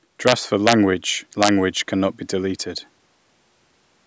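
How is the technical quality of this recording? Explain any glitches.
Integer overflow causes three sharp glitches on loud peaks, at 0.27–0.32 s, 0.67–0.72 s and 1.43–1.49 s. Overshooting full scale by about 1–2 dB, the samples wrap to the opposite sign instead of being limited. This produces violent cracks, harsher than clipping. Waveform peaks jump edge to edge, and the spectrogram shows broadband vertical streaks reaching the 8 kHz ceiling of the call's microphone path.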